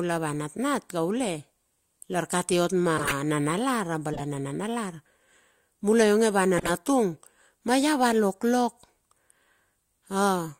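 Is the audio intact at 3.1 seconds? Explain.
No. Right after "lar kati ot", from 2.97 to 3.15 s, there is a corrupt frame decoded fault. Flipped bits in the compressed data were played anyway, so misread gains and codes put energy at the wrong frequencies. The result is a squeaky, noisy burst peaking around -10 dBFS, with a length that fits about seven damaged frames. A dropout or concealed lost packet would leave a gap or a smeared repeat. This instead adds a foreign chirp.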